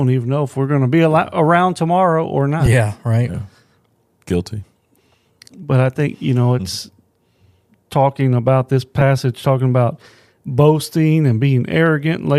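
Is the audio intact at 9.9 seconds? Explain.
Yes, the audio is intact at 9.9 seconds, with no fault in the speech at that moment.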